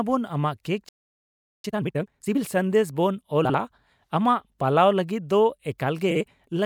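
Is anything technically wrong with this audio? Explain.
Yes, the speech has three kinds of playback and delivery fault.

Playback stall, 0.89 to 1.64 s: the speech cuts off in mid-flow and the output falls silent for about 0.75 s. The player most likely ran short of incoming data or had its output thread held up, so nothing was written to the device until it recovered. Then the sound comes back.

Time-compressed catch-up, 1.64 to 2.38 s: right after the gap the speech rushes along at twice its normal rate while keeping its normal pitch. Having fallen behind, the player is draining its backlog by cutting small pieces out of the audio and cross-fading across the cuts. Pitch stays correct, but the speech sounds hurried.

Frames out of order, 3.44 to 3.55 s and 6.11 to 6.21 s: each time, two adjacent 48 ms blocks, each consistent with a pair of codec frames, were delivered swapped and decoded in that order. 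The stretch plays with its halves exchanged, producing a brief garbled flutter. The total duration is unchanged.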